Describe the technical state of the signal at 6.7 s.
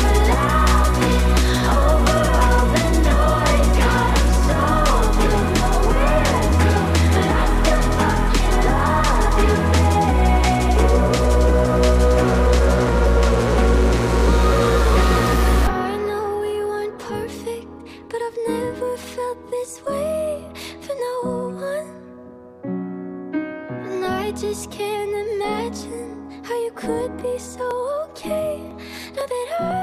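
The signal at 6.7 s is intact, with no audible fault at that moment.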